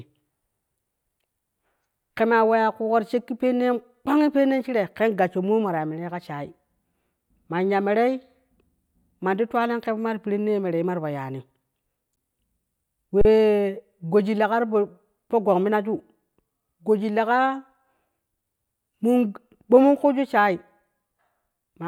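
At 12.16 s and again from 13.21 to 13.25 s, there's an underrun with held sample: the buffer ran dry, the waveform froze flat for 10 and 37 ms, then resumed where it stopped with only a soft click.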